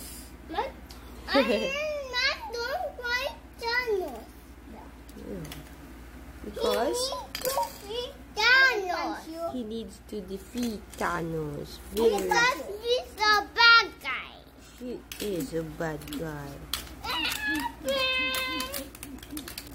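Nothing in this audio stands out as a technical problem; it all comes across without any trouble worth pointing to.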